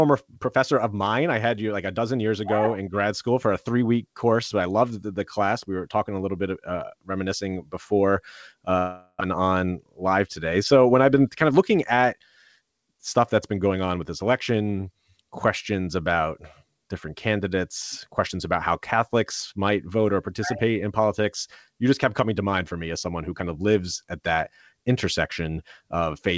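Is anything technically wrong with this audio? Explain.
Yes. There is a long network dropout at 8.78 to 9.23 s, likely caused by packets that never arrived, so 400 ms is lost. The receiver stretches the last sound into a fading buzz or hiss for 0.43 s, then 30 ms of silence, before sound resumes past the gap. The call codec's band limit at 8 kHz is consistent with G.722.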